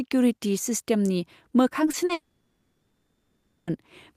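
At 1.85–1.89 s, 1.91–1.95 s and 2.05–2.11 s come three instances of short concealed packet loss, 20, 20 and 40 ms of speech filled in by extending the preceding sound. Each is heard as a brief smear or wobble, seen as smoothed, blurred harmonics.

From 2.13 s to 3.69 s the audio trails off into a fading buzz or hiss, then about 1.4 s of silence, likely a long network dropout. The spectrogram shows energy dying away into a blank band, and the waveform goes flat before resuming.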